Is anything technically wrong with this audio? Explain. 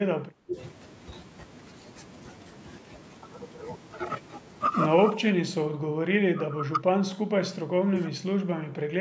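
Yes. There are three kinds of fault in this speech.

Computer activity noise runs through the whole clip. When the processor, graphics card or mouse changes its load, the current it draws disturbs the ground that the audio circuit shares with it. That disturbance is heard here as a faint buzzy pulsing at around 100 Hz, roughly 40 dB below the speech. It follows the computer's activity rather than the talker, so it is there in the gaps as well.

Speech suppressed in double talk occurs from 0.0 to 0.56 s, briefly from 5.09 to 5.17 s, from 5.41 to 7.94 s, and from 8.11 s to the end. When both sides talk at once, the echo canceller likely cannot tell this talker from the far-end echo and turns everything down. The voice dips by up to around 20 dB at the start and in the long middle stretch, by only a few dB at 5.1 s, and by roughly 15 dB at the end, thinning or breaking up in pieces.

Echo leak occurs at 8.05 to 8.1 s. 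With the other side on a loudspeaker, its echo canceller likely missed part of what its microphone picked up and sent it back. The result is a brief, faint scrap of the voice repeating about 275 ms late, some 25 dB below the speech, within the call's band that stops at 8 kHz.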